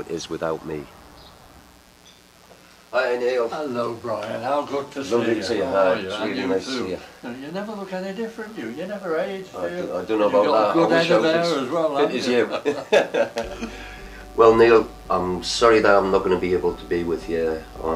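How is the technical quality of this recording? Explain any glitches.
The recording carries a constant mains buzz from start to finish, sitting about 35 dB below the main signal. It is based on 60 Hz mains: sharp switching spikes, likely from a dimmer, rectifier or unshielded cable, arrive twice per cycle and spread energy across many 60 Hz harmonics up into the several-kilohertz range. Rather than a clean low hum, the result is a steady, raspy buzz underneath the audio throughout.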